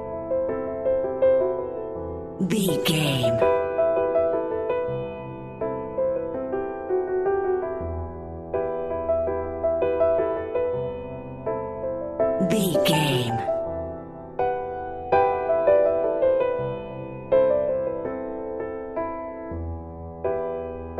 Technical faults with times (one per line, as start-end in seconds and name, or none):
none